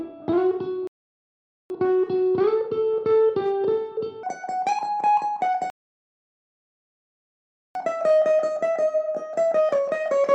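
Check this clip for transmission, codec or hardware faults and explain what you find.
Two kinds of fault are present.

Rebuffering stalls at 0.87–1.70 s and 5.70–7.75 s: the player exhausted its buffer, so the sound drops to silence for 0.83 s and 2.05 s, then resumes exactly where it stopped.

Section at the wrong speed from 4.23 s to the end: playback runs 1.68 times fast, raising pitch by about ten semitones, with speed and pitch shifting together. The likely cause is resampling to a mismatched clock.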